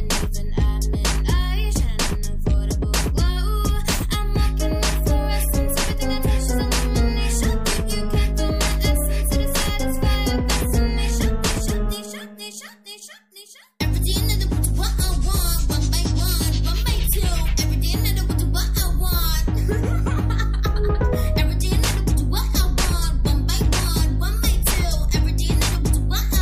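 No technical faults can be heard anywhere in the clip. There is nothing here to place on a timeline.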